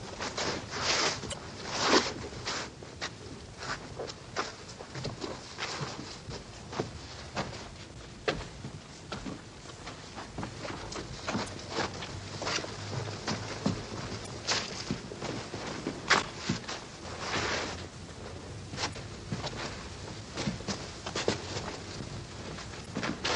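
Damaged data in a compressed stream produces brief glitches at 1.29–1.35, 14.23–14.28, 18.90–18.96 and 22.82–22.87 s, each about 55 ms. At each point corrupted bytes make the decoder misread frames, lose sync and hunt for the next header, breaking up briefly through the sound.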